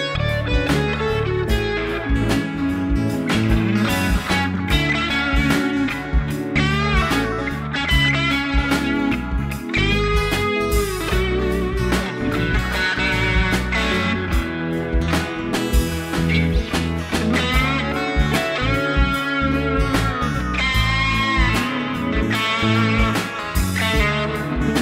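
No faults detected in this recording.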